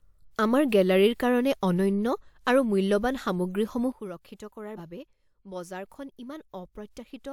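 At 3.92 s there's a sudden gain jump. The level drops by about 12 dB in a single step and stays down right to the end. The speech and the background noise fall together, so it isn't the talker getting quieter. The cause is likely a digital gain change applied instantly, with no ramp, such as a setting snapping to a new value or a bit shift. It's a hard step you can hear, not a fade.

A little later, between 4.76 and 4.79 s, compressed frames were skipped. About one frame of the encoded stream, around 50 ms of audio at this codec's 46.4 ms frame length, never got played, either because it was missing or because the decoder rejected it as damaged. The speech jumps forward by that amount.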